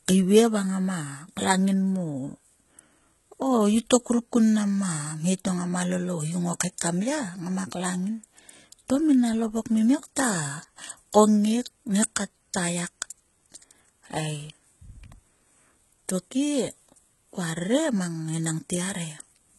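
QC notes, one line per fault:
throughout: HE-AAC compression. The treble sounds synthesised, which points to this codec at a very low rate, around 16 kbps. It likely coded only the lower spectrum and rebuilt the top by copying lower bands upward under a coarse envelope. The damage is heavy: the highs stay bright but their harmonics no longer line up with the body of the speech, so s sounds come out gritty and lispy, and nothing sounds above about 11.8 kHz.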